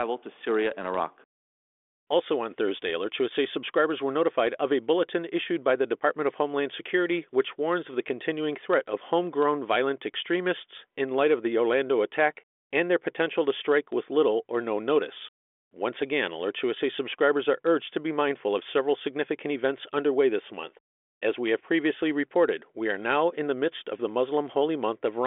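Nothing is technically wrong with this speech recording, which comes through a G.726 ADPCM telephone path at 40 kbit/s with its band ending below 4 kHz.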